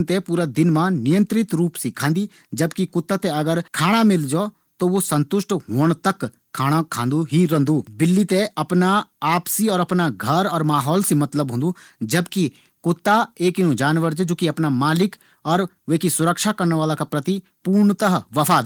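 No technical faults are audible.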